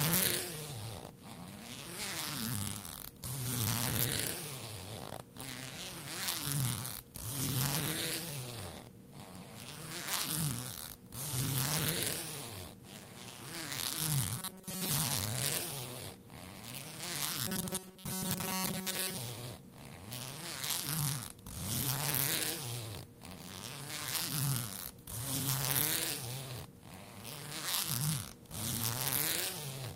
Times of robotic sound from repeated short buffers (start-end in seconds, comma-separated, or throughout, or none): 14.37-14.91, 17.47-19.18